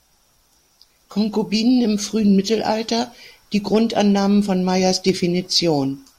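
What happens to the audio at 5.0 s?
Hard clipping runs from 4.85 to 5.10 s: the speech overdrives a stage by about 2 dB, flattening peaks and adding a brief crackle on the loudest moments.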